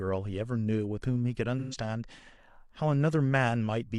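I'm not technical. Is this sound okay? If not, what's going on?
No. From 1.59 to 1.76 s the speech turns smeared and noisy for a moment. This is AAC frame loss with concealment. A short run of data went missing, and the player filled the gap by guessing from the sound just before.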